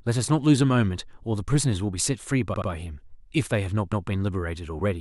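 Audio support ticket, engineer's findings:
Repeated frames, speech stutter at 2.54–2.69 s: 78 ms block replayed twice; at 3.92–4.08 s, 157 ms block replayed once. Compressed frames written or sent more than once upstream of decoder. Unlike a dropout, identical audio recurs, and each event lengthens the clip by 157 ms.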